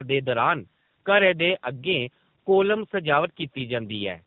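Throughout, tandem speech coding passed the speech through two speech codecs in turn, each compounding the other's errors, so it sounds rough, warbly and muffled, with nothing above 3.8 kHz.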